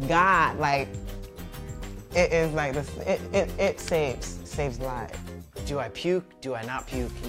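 Right at the start there's a short burst of hard clipping, from about 0.18 to 0.40 s, where the audio runs roughly 2 dB past what some stage in the chain could pass, so the peaks get sliced flat. With an overload that small it's not a continuous fuzz. You get a brief crackly edge on the loudest moments, because those squared-off tops throw extra harmonics well up the spectrum.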